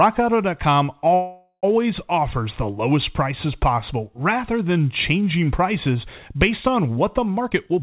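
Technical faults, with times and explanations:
1.14–1.65 s, call audio freeze: the sound stretches into a fading buzz or hiss, ending in about 70 ms of silence, likely from delayed packets. Speech then resumes intact with "offers the lowest prices", so this is an inserted gap, not a dropout.
7.36–7.82 s, jitter buffer speed-up: after "based on what the", speech runs at about 133% speed with unchanged pitch, as roughly 150 ms of pitch periods are cut, unlike resampling, which raises pitch.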